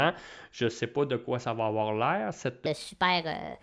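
From 2.66 s to the end at 3.63 s, right after "ça va avoir l'air", a wrong sample rate takes over. Audio recorded at 16000 Hz plays at 22000 Hz without conversion, so speech runs 1.38 times fast and about 5.6 semitones high. On a spectrogram, harmonics and formants shift upward and the syllables compress in time.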